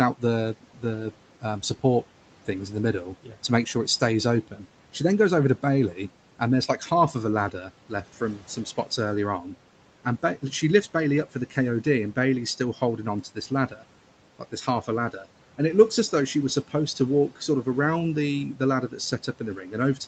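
The noise suppressor keeps cutting speech at 0.18–4.61 s, 5.94–10.43 s (after "then goes over to"), 11.34–15.59 s and 16.68–19.98 s. It treats quiet bits as room noise and ducks them about 10 to 12 dB, so a few hundred milliseconds per stretch sound swallowed.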